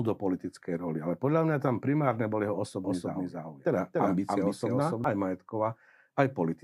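From 2.84 s to 5.04 s the speech is heard twice: a second full-band copy trails the first by roughly 0.3 s, at about the same loudness, with no decay or room colour, and it cuts in and drops out abruptly at those edges. This is a doubled audio track, likely from the same signal being captured again through a slower path or an edit leaving two copies out of step.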